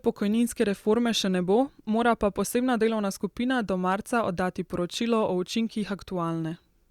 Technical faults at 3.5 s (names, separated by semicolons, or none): none